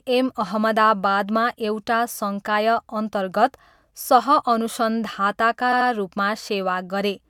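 At 5.72 s the speech stutters until 5.89 s, with an 85 ms slice heard twice more. These are repeated frames: a short run of compressed frames, which fits about four, was delivered again. Unlike a dropout, nothing is lost, and the clip gains 171 ms.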